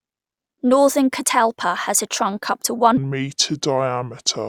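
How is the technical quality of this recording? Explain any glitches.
The recording has one clear glitch, a section at the wrong speed. From 2.97 s to the end at 4.48 s, just after "a trunk up to", the speech turns deep and slow, dropping roughly seven semitones. Playback there runs at 0.66 times normal speed, likely because that section was fitted to the wrong clock, so pitch and tempo fall together.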